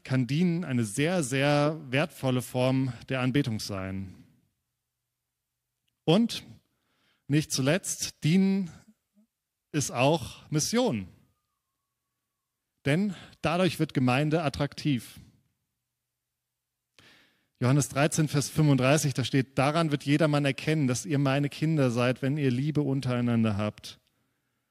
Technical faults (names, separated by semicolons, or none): corrupt frame decoded